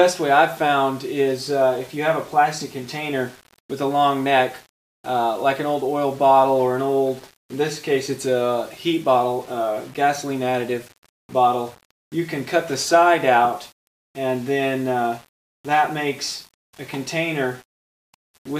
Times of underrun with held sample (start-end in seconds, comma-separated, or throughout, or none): none